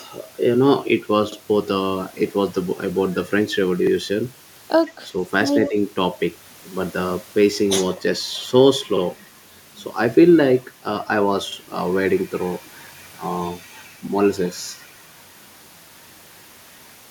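Around 5.03 to 5.08 s the speech ducks briefly, a shallow dip of about 5 dB lasting roughly 50 ms. That's likely speech suppressed in double talk, where the echo canceller couldn't tell this talker from the far end and pulled everything down. From 5.65 to 5.7 s there's a faint delayed copy trailing the voice by 120 ms, sitting about 15 dB under it. That's likely an echo leak, with loudspeaker sound slipping past the canceller and coming back. Right on its heels, from 5.69 to 5.76 s, the speech drops again, this time by about 10 dB over around 70 ms, most likely speech suppressed in double talk again.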